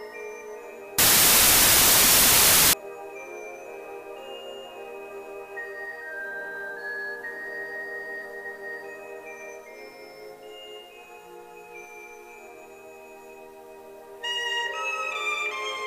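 From 0.98 s to 2.73 s, a wrong sample width fault: 16-bit samples are read as packed 24-bit, so most values straddle mismatched bytes. The section becomes loud noise with the original buried inside, playing 1.5 times fast and raised in pitch.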